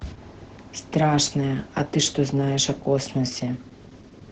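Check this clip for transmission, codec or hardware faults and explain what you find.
There is one codec fault, and it runs through the whole clip. Opus voice compression: the speech sounds muffled, hoarse and slightly robotic throughout, with nothing above about 8 kHz. That fits Opus in its SILK speech mode at a very low rate, near 10 kbps, where the band is cut to wideband and the excitation is coded only coarsely.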